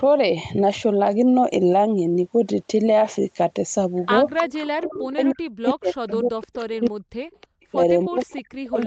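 From 4.37 to 4.94 s a copy of the speech trails about 315 ms behind, roughly 10 dB down. This is an echo leak, likely loudspeaker sound that the far end's echo canceller failed to remove. From 4.54 s to the end, the talker's level sinks in patches, dropping at worst by around 40 dB. That points to speech suppressed in double talk, likely the canceller ducking everything while both sides overlapped. A weaker echo leak returns from 5.71 to 8.84 s: the same 315 ms delayed copy, now about 25 dB below the speech.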